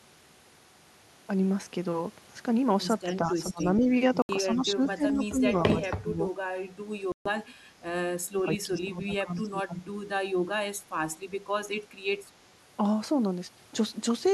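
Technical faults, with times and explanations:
3.05 to 3.89 s, 4.43 to 6.21 s and 8.32 to 9.96 s, speech suppressed in double talk: the voice sinks and thins in pieces, about 10 dB down in the first stretch and about 20 dB in the later two, roughly half a second, one and a half seconds and one second in total. Likely the echo canceller, faced with both sides talking at once, pulled down the near talker along with the echo.
3.08 to 3.13 s, 3.59 to 3.82 s, 5.50 to 5.54 s and 5.81 to 5.91 s, echo leak: faint scraps of a delayed copy trail the voice by 187 ms, about 25 dB below it, rising to about 15 dB below at 3.59 s. This is likely loudspeaker sound the far end's canceller failed to remove and sent back.
7.12 to 7.29 s and 4.22 to 4.31 s, Bluetooth stall: the audio drops to silence for 136 ms and 71 ms, then resumes. Likely interference delayed packets, so the headphones' buffer emptied and playback halted until the resent data arrived.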